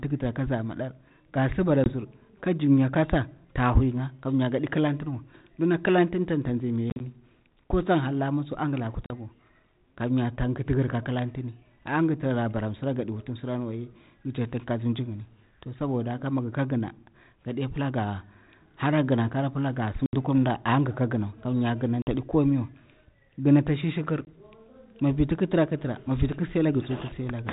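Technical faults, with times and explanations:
1.84, 6.9, 9.06, 20.06, 22.02 and 24.25 s: packet loss on an ADPCM call. Hard-edged silent holes of 20, 60 (scattered over 100 ms), 40, 70, 50 and 20 ms. Unlike a plain dropout, the speech resumes with a brief, slight distortion that settles within tens of milliseconds. The missing differences desynchronise the decoder's adaptive predictor and step size, over a band-limited line consistent with 32 kbit/s G.726.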